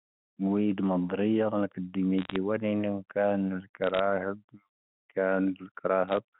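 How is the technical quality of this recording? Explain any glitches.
The audio is telephone-band speech carried over G.711 coding, with nothing audible above about 3.5 kHz. Three short bursts of crackle break into it, from 2.19 to 2.36 s, from 3.84 to 3.99 s, and from 6.08 to 6.17 s.

Each burst is a cluster of sharp ticks over speech that is otherwise unchanged. These are bit errors on a digital phone line, with roughly a fraction of a percent of bits flipped during each burst. Every flipped bit corrupts a single logarithmically coded sample, and a flip in the sign or a high-order bit throws that sample far off, producing a click. Dense runs of these errors merge into brief crackle.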